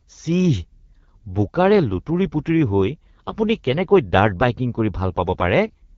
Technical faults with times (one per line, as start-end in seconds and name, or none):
0.00-5.97 AMR wideband (HD Voice) codec